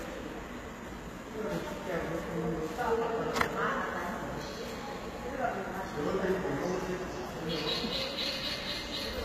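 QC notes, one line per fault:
Throughout: HE-AAC compression, likely. The treble is gritty and metallic, with nothing above 14.9 kHz. Upper bands sound copied from lower ones, so harmonics misalign at the crossover. The damage is plainly audible, which fits a low bitrate near 20 kbps.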